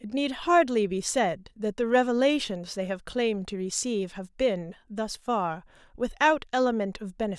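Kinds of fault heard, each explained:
No audible faults detected.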